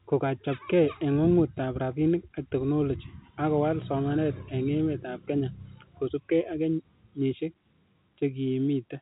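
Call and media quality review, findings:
No call or media quality findings: the speech comes through as ordinary G.711 telephone-band audio, with nothing above about 3.8 kHz.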